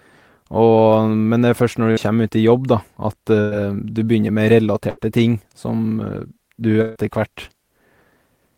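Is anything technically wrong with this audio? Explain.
Yes, there's a burst of packet loss four times, at 1.91 to 1.99 s (just after "først når"), 3.41 to 3.53 s, 4.89 to 4.99 s and 6.81 to 6.97 s. Each time the receiver stretches the last sound into a fading buzz or hiss for roughly 50 to 140 ms, then jumps ahead, skipping about 60 to 140 ms of speech.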